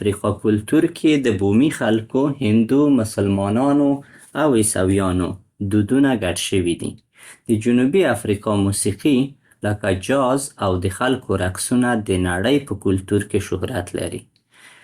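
No audible technical faults present.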